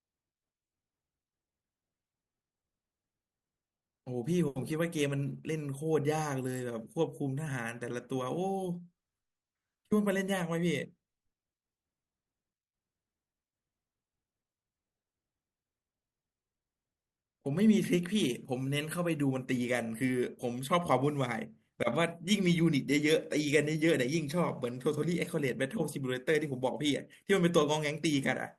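No technical faults can be heard anywhere in the speech recording, and the signal stays continuous and steady throughout.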